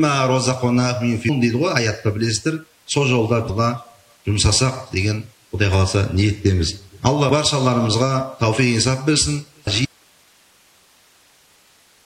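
Brief glitches at 1.28 s, 3.49 to 3.51 s, 7.29 s and 9.66 s are damaged data in a compressed stream: the decoder loses frame sync and searches for the next frame header, unlike clean clicks. From 9.85 s to the end, an audio dropout to a faint residue leaves only hiss roughly 40 dB down, likely a lost signal on a still-live path rather than a fade.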